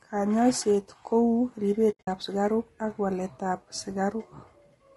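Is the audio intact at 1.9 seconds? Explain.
No. From 1.91 to 2.08 s there is AAC frame loss with muting: the decoder zeroed the missing frames, and overlapping windows fade the sound out and back in, leaving soft-edged gaps. Together they cover about 140 ms of that 160 ms span, and the longest run is around 70 ms. Underneath, the speech is rough and grainy with noise between harmonics, likely from low-delay AAC compression (AAC-ELD) at a low bitrate, consistent with roughly 32 kbps.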